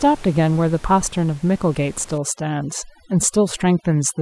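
A short speech recording with overdone noise removal from 2.18 s to the end at 4.22 s. Before that, the room noise sits steady at about 25 dB below the speech. Then an over-aggressive noise reducer pulls individual frequency bands down to nothing whenever they approach its noise estimate. The background collapses to near silence flecked with twinkling specks, and the quieter parts of the voice are stripped away with it. A low-bitrate codec would smear the whole signal. This damage follows the noise floor and is worst in the softest passages.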